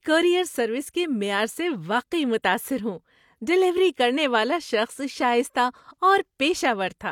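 From start to finish the speech has nothing above 18.5 kHz, and the damage of an earlier lossy encoding remains audible despite the file's generous size. The likely cause is low-bitrate audio saved at a high bitrate: the sound points to a low-rate codec such as HE-AAC at around 40 kbit/s, later re-encoded as MP3 at 320 kbit/s. The second encoding keeps the first one's losses and cut-off and cannot bring back what was discarded.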